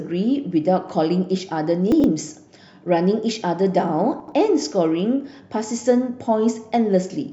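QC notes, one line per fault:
1.92–2.04 s and 4.20–4.32 s, chunks out of order: in each 0.12 s window a 40 ms chunk of speech arrives two chunks late and plays after the two that should follow it. Nothing is missing, but the sequence is shuffled, so the speech briefly sounds jumbled across three hard joins. On a waveform, three abrupt discontinuities within about 0.12 s; on a spectrogram, thin vertical broadband lines at each join, with formant tracks jumping back and forth between segments.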